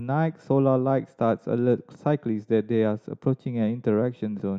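Nothing goes wrong anywhere in this stretch of speech, so there's no fault to pin to any moment.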